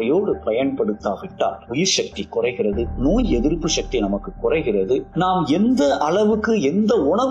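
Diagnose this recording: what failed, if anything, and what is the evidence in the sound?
A corrupt frame decoded at 3.20 to 3.24 s, in the codec stage, sounds like a brief chirpy burst lasting about 40 ms, with stray energy peaking at around -20 dBFS. Bit errors inside the compressed data were not caught, so the decoder used damaged gain values and spectral codes and rebuilt sound at the wrong frequencies. The span points to a couple of adjacent frames, after which decoding recovers cleanly.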